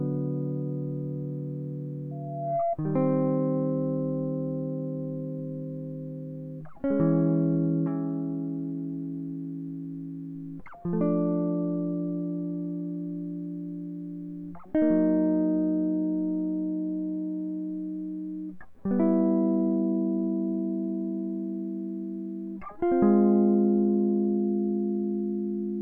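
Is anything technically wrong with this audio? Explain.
Yes. Loudspeaker feedback squeal runs from 2.11 to 2.77 s: a microphone re-captures its own loudspeaker, and at 682 Hz the loop gain passes unity, so that tone swells over roughly half a second into a steady squeal about as loud as the music.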